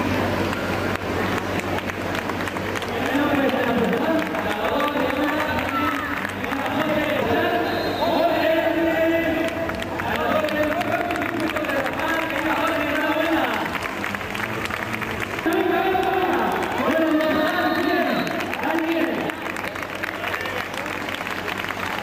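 Three sharp, isolated ticks land at 15.53 s, 16.52 s and 19.65 s, each a broadband click with no link to the surrounding sound. These are bit error spikes: a single flipped bit in memory or on a digital link throws a sample value off by a power of two and it snaps straight back. The first two sound like one corrupted sample each, while the tick at 19.65 s fits two adjacent samples being hit.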